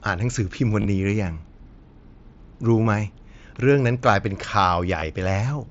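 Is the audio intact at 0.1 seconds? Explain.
Yes, the audio is intact at 0.1 seconds, with no fault at that moment.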